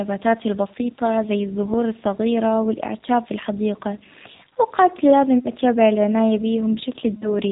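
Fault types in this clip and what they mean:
G.729 codec: The speech runs through an 8 kbit/s G.729A coder throughout. It is rebuilt from a vocal tract filter, a pitch predictor and a few pulses per frame, so nothing above 4 kHz survives and the voice has a plainly audible rough, synthetic edge.
VoIP packet loss concealed by the speech codec: Around 5.39 to 5.52 s and 7.14 to 7.28 s, missing stretches of 60 ms and 80 ms are filled by stretching the last pitch and filter at falling gain. This is heard as a buzzy tone or coloured noise that fades, consistent with three and four lost packets.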